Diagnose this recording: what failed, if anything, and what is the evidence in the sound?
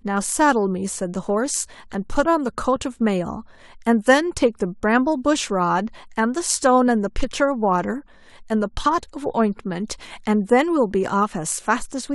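Nothing in the signal chain has failed, and the speech recording shows no audible technical fault at any stage from capture through to playback.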